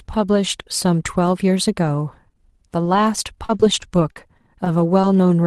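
Between 2.95 and 5.04 s the speech picks up scattered short gaps: about seven brief losses, the longest around 40 ms, totalling 140 ms missing, of which 110 ms was rebuilt by stretching the preceding sound forward. Each one is heard as a small tick, smear or hiccup. On a spectrogram these show as narrow vertical seams where harmonics freeze or blur; the waveform shows short, overly regular repeats, all inside an Opus band that tops out near 12 kHz.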